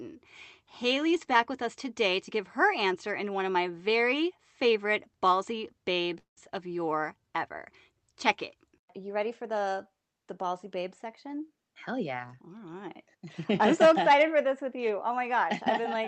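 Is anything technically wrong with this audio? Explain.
Yes. There are three call-network faults in this speech.

At 6.03 to 6.06 s, just after "my very favorite ballsy", there is a short stall from a late packet. The jitter buffer ran dry, so the last sound is held for an extra 17 ms.

At 6.18 to 6.39 s comes a call audio freeze. Sound stretches and fades into about 130 ms of silence, likely because delayed packets emptied the buffer. It then resumes where it stopped.

From 11.05 to 12.49 s, between "the the ballsy babe" and "right I'm so", there is a jitter buffer speed-up. Short pitch-period chunks, about a tenth of a second in total, are cut. Speech runs 108% fast at the same pitch and sounds hurried.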